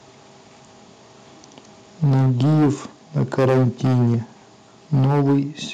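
Microphone overload, 2.03 to 2.70 s: the speech drives peaks about 10 dB past the converter's ceiling, likely from excessive input gain, flattening roughly a third of the waveform into a harsh, crackling edge. Microphone volume stepped down at 2.04 s: level and background drop about 3 dB in one step as the input gain is likely cut mid-distortion. Microphone overload returns from 3.16 to 4.15 s, about 13 dB over, with roughly a fifth of samples clipped, and again from 4.93 to 5.38 s, about 8 dB over, similarly crackly. Inside that last burst, at 5.05 s, the volume is stepped down by about another 3 dB.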